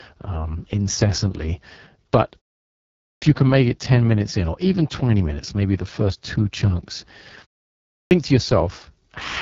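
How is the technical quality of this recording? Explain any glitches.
Technical quality is poor. The speech is heavily coded and two phrases lose their openings after pauses.

AMR wideband (HD Voice) codec: Throughout, the voice sounds rough and raspy, with nothing above 7.5 kHz. The damage points to AMR-WB at its lowest rate, around 6.6 kbit/s. At that rate the pulse-driven vocal tract model cannot describe the speech finely, and the top band is only shaped noise.

Clipped start after a pause: At 3.09 s, "you can make it" bursts out of silence with about 128 ms of its beginning missing. At 8.0 s another phrase loses about 109 ms the same way. Each comes after a gap of 0.6 to 0.8 s, long enough for the output device to sleep. It needs time to wake again, so the first sounds are swallowed.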